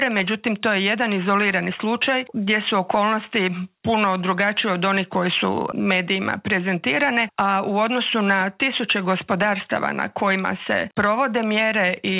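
Nothing here sounds wrong: the audio simply carries the narrow, telephone-like character of a call path that stops at about 4 kHz, which fits a G.711 mu-law link at 64 kbps.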